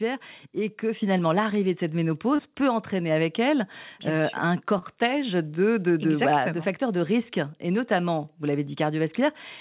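At 1.02 s the microphone volume steps up. The call software judged the input too quiet and raised the device gain by about 5 dB in one move. Voice and background jump louder together.

Short concealed packet loss follows twice, at 2.36 to 2.41 s and 4.78 to 4.85 s. Each time about 30 ms of audio arrived too late. The receiver extended the preceding sound to cover the gap, then blended back. Each hole is heard as a brief smear through the band-limited, telephone-like sound, which has nothing above 4 kHz.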